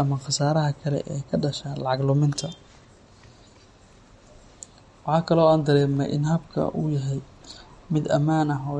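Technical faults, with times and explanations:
Throughout: MP3 compression. The speech stops dead at 11.2 kHz and sounds plainly watery and swirling, with metallic sibilants, as weak frequency lines switch on and off between frames. This is likely low-bitrate MP3 encoding, consistent with around 48 kbps.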